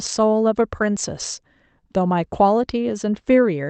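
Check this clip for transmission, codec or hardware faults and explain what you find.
No transmission, codec or hardware faults.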